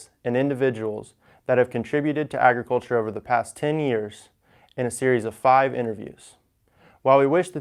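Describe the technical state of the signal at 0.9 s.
At 0.9 s the speech signal is intact, with no fault present at that moment.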